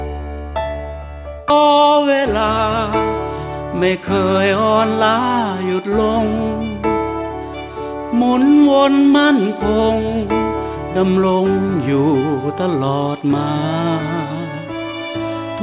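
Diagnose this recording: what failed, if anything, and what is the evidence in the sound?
The trouble is in the network and jitter buffer stage of a call path. At 1.5 s playback jumps straight ahead with no gap and no fill. That's a skip ahead: roughly a second of audio got thrown away while later audio was already waiting, either lost in transit or discarded when the buffer overflowed, so the two sides of the jump butt together almost directly. You can hear it in the abrupt join, behind audio that's band-limited with nothing above 4 kHz, which fits a narrowband G.711-type codec.

Right after the skip, from about 1.6 to 2.41 s, there's a jitter buffer speed-up. The sound runs about 10% fast at unchanged pitch, so that stretch comes across as hurried rather than chipmunky. The buffer was still holding more than its target, so it trimmed a series of tiny pitch-period-sized slices, on the order of a tenth of a second in total, to pull the delay back down.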